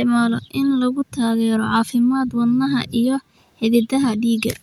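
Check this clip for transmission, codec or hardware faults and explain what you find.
The speech signal shows no technical faults that can be heard, so there is nothing to report.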